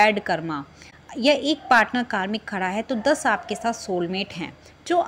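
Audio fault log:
0.90–0.93 s AAC frame loss with muting: the sound briefly drops away in a short, soft-edged dip of roughly 21 ms, which fits a single lost AAC frame. With that frame's spectral data missing, the decoder fills it with zeros, and the overlapping transform windows on either side taper the signal down and back up rather than cutting it. The result is a smooth dip and recovery, heard as a momentary dip in the sound.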